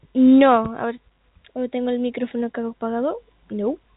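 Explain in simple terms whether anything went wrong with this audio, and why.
Nothing went wrong here: the speech just has the narrow, slightly boxy sound of an ordinary landline call, where everything above about 3.8 kHz is missing because the telephone coding is doing its normal job.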